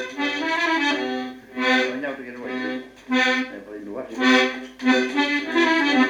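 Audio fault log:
Nothing stood out on listening to the clip.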